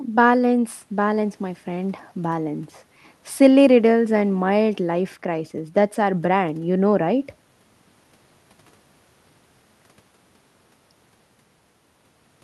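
No technical faults occur at any point in the recording, so there is nothing to describe.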